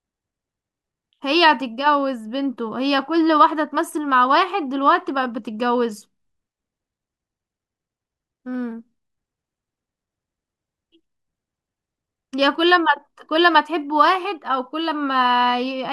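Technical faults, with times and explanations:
No technical faults detected.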